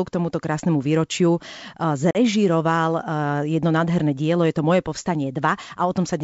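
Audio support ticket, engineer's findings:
Packet loss on an ADPCM call, 2.11 to 2.17 s: hard-edged silent gap of about 40 ms, a handful of packets gone. Decoder's predictor and step size drift from the sender's, so the speech comes back slightly distorted before settling. Wideband G.722-style coding sounds clean around it.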